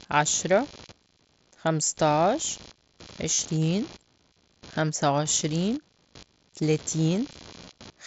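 A faint buzzing runs under the speech for the whole clip, pulsing at around 70 Hz and sitting roughly 25 dB below the speech. It shifts independently of the speech, the mark of computer activity noise. Changing load on the processor, graphics card or mouse pushes current through the ground that the audio circuit shares, and those swings ride into the signal as this low, restless buzz.

At 3.34 s the speech gives way to a short, buzzy tone held at full level, with a slight warble as normal audio resumes at about 3.39 s. A second, briefer blip comes at 7.65 s. Both are concealed Bluetooth headset packet loss: headset packets went missing, and the receiver filled the gaps by repeating the best-matching recent stretch of waveform. The first gap of about 45 ms fits roughly six lost frames. The second, about 15 ms, fits two frames. The speech comes through the mSBC headset codec at wideband quality.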